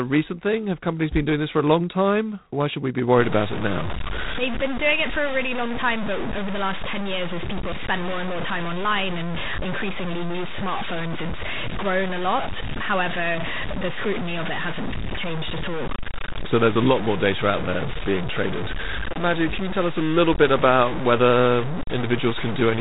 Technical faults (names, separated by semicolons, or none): G.726 ADPCM; low bit depth without dither